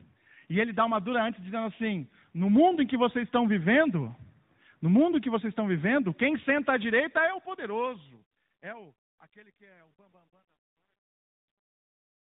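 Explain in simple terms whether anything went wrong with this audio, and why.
Two things went wrong. The first is tandem speech coding, heard all the way through. The speech passed through two different phone-style speech coders, one after the other. The second coder had to work on sound the first had already roughened. The damage adds up. The result is rough, muffled and warbly speech, with nothing above about 3.8 kHz. That missing top end is why it sounds dull and boxy.

The second is truncation distortion on a fade, from 7.03 s to the end at 12.24 s. The clip fades out from around 7 s. But the quiet tail was handled with too little detail and no masking noise. The sound breaks into coarse steps as it gets softer. From about 8.7 s to the end it sounds gritty.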